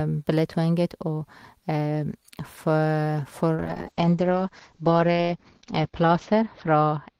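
At 3.61 s the call's bandwidth estimate falls and the encoder is starved of bits, which fits a drop from around 32 kbps to 8 kbps. This call bitrate drop makes the speech coarse and watery. The top end is cut from 20 kHz to 8 kHz, and the sound stays at its worst for 2.17 s without recovering.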